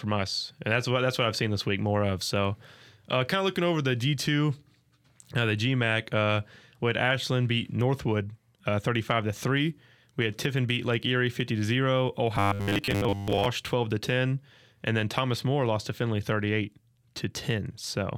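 After "fifty to zero", from 12.36 to 13.46 s, the speech turns into robotic sound from repeated short buffers: a rigid, metallic 100 Hz buzz, likely from roughly 10 ms chunks looping while most of the audio is skipped. Unlike a dropout, it never goes silent, and it still loosely tracks the words until "twelve to ten and".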